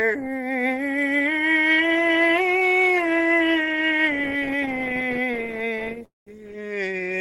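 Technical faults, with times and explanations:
4.41–6.03 s, repeated stalls (stutter): the music catches 34 times in this stretch, in brief hitches none longer than 16 ms. The receiver's jitter buffer kept running dry because packets were arriving late or more slowly than they were played. Each hitch was bridged by extending the last sound. The fills total about a third of a second, roughly a fifth of the span. Nothing is lost, but the passage drags and judders.
6.05–6.29 s, call audio freeze: the music stops for 218 ms. The last sound is held briefly and fades, then about 160 ms of silence follows before playback resumes exactly where it left off. The likely cause is packets held up in transit long enough to empty the jitter buffer completely. Because the receiver waited rather than skipped ahead, no audio is missing. Everything after this point runs 218 ms later than before.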